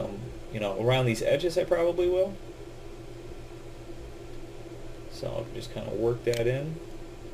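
No technical faults can be heard anywhere in this audio.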